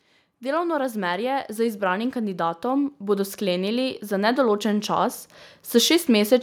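Automatic gain rising from 0.4 s to 6.38 s: the gain control judged the input too quiet and climbed about 13 dB, swelling speech and background together.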